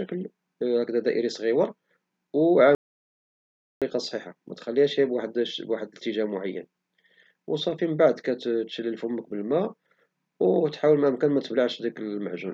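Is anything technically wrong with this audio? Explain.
Yes. An audio dropout to silence runs from 2.75 to 3.82 s, about 1.07 s long. The input was likely lost while recording continued, writing silence. The speech cuts off abruptly, leaving dead silence with no room tone, then resumes mid-flow with that stretch missing.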